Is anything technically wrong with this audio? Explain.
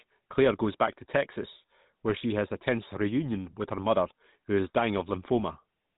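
Yes, the speech has been through the GSM full-rate codec for the whole clip, and the damage is plainly audible. It models the vocal tract and drives it with a coarse, regularly spaced pulse excitation, which fits a 13 kbps stream. That leaves a buzzy, gravelly roughness and nothing above 4 kHz.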